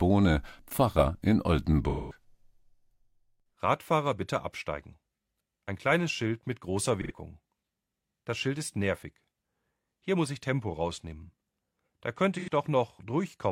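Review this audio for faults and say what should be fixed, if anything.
AAC frame loss with concealment at 1.89–2.24 s (about 213 ms), 7.01–7.12 s and 12.38–12.48 s (about 85 ms each): the decoder rebuilds missing frames from the last good spectrum, producing smeared, phasey patches. Protect the transport with retransmission or forward error correction.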